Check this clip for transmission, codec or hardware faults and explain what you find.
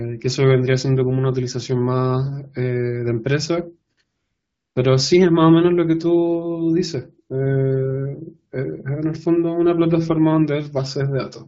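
The clip has two AMR comfort noise gaps in the speech. The first runs from 3.93 to 3.97 s, lasting 40 ms. The second runs from 4.03 to 4.75 s, lasting 720 ms. In both, the sending phone treated the talker as silent and stopped transmitting speech frames, so the receiver synthesised a steady, smooth noise from a coarse level and spectrum description. The real background drops out and is replaced by that flat hiss, which switches in and out audibly at each boundary. The underlying AMR wideband coding sounds clear, with only light coding texture, consistent with a mid-to-high wideband rate.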